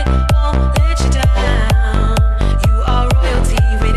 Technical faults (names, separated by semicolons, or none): none